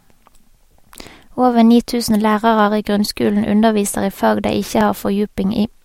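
Two device clocks likely disagree by around 500 ppm, so clock drift buffer slips drop or repeat a few dozen samples every 1.35 s from 0.75 to 4.81 s, heard as regular clicks.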